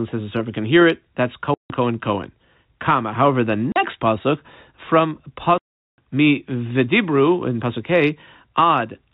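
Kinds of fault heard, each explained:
Packet loss filled with silence: missing packets were replaced with digital silence, cutting hard-edged holes in the speech at 1.54–1.70 s, 3.72–3.76 s and 5.58–5.98 s. The gaps last 160, 40 and 400 ms, which fits 20 ms packets.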